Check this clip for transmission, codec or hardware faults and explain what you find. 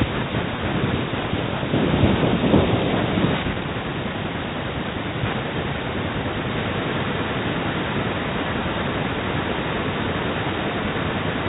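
Two faults show up here: a pair of brief packet-loss glitches early on, and an echo that runs through the second half.

Packet loss with pitch repetition hits at 0.56–0.58 s and again at 3.54–3.56 s. Each gap is about 20 ms, which fits a single lost packet. The receiver patched it by repeating the last pitch period, so you hear a tiny held, buzzy blip rather than a dropout.

From 6.52 s to the end there's an echo leak: a delayed copy of the talker arriving about 0.9 s late and sitting roughly 10 dB below the main signal. The likely cause is a far-end loudspeaker whose echo canceller let part of the pickup back into the line. The G.711 telephone band is audible underneath all of this.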